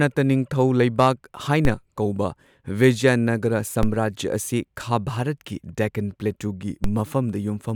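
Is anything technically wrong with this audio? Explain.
Yes. Three DC steps occur in this speech, at 1.65 s (just after "ꯅꯤꯡꯊꯧ ꯂꯩꯕꯥꯛ"), 3.83 s (just after "ꯀꯧꯕ ꯕꯤꯖꯌꯅꯒꯔ") and 6.84 s (just after "ꯈꯥ ꯚꯥꯔꯠꯀꯤ ꯗꯦꯛꯀꯥꯟ ꯄ꯭ꯂꯦꯇꯨꯒꯤ"). Each time, the waveform's zero line abruptly shifts by about −11 dBFS, then drifts back as a 5 Hz high-pass bleeds the offset away. The sudden jump registers as a brief low thump or click, while the speech continues through it unchanged.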